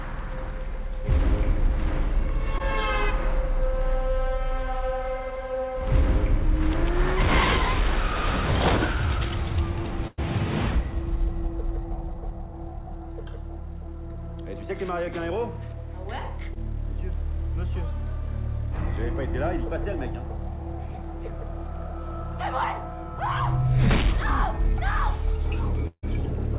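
A phone-call recording, heard through a narrowband codec with nothing above 4 kHz, which fits G.711 mu-law at 64 kbps, and the network clearly hiccups four times. Two of those are short concealed packet loss, at 2.58 to 2.61 s and again at 16.54 to 16.57 s. Each time about 20 ms of audio never made it, and the receiver papered over it by stretching out whatever had just been playing before easing back into the real signal, so you get a tiny smear or wobble rather than an obvious hole. The bigger one is a burst of packet loss from 10.07 to 10.20 s. Roughly 100 ms went missing in a row, and the concealment kept the previous sound going for that whole stretch while fading it down, so you hear a held buzz or fading hiss, never true silence. Then the audio picks up further along, with that tenth of a second simply gone. Right at the end, from 25.87 to 26.05 s, there's a longer gap: about 150 ms of the last sound dragged out and fading, then around 40 ms of dead silence before the audio returns, with about 160 ms of the original lost. 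That's most likely a long network dropout, where nothing arrived for long enough that the receiver ran out of anything plausible to fill with.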